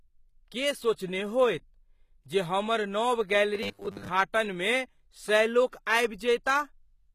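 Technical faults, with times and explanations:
throughout: HE-AAC compression is the likely cause of the plainly audible codec damage, which fits a low bitrate around 20 kbps. The treble is rebuilt from copied lower bands, so its harmonics misalign. A spectrogram shows patchy, repeated-looking texture up to a hard ceiling at 14.9 kHz.
3.55–4.09 s: robotic sound from repeated short buffers. About half this stretch is a 10 ms slice played again, likely because audio arrived too late, imposing a rigid 100 Hz buzz. The waveform shows identical repeating cycles, and the spectrogram shows evenly spaced 100 Hz harmonic stripes.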